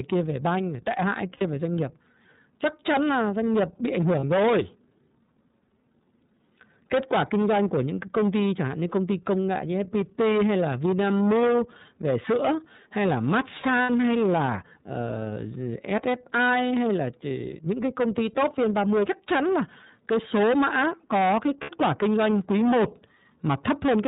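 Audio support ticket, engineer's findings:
Hard clipping, throughout. Harsh fuzz on every loud syllable. Gain stage overdriven by about 17 dB, so a large share of peaks are cut flat, adding high harmonics.

iLBC codec, throughout. Speech band-limited below 4 kHz, rough and synthetic. Plainly audible coding damage; fits iLBC's 13.33 kbps mode with 30 ms frames.

Lost iLBC frames, four dropouts. 1.35–1.42 s, after "về banh tệ hại", before "về doanh nghiệp"; 4.20–4.24 s, after "doanh nghiệp bị ảnh"; 13.83–13.90 s, before "hay là"; 21.63–21.70 s. Brief held, buzzy vowel from decoder concealment repeating the last pitch cycle; each fits one or two missing 30 ms frames. Recovers immediately.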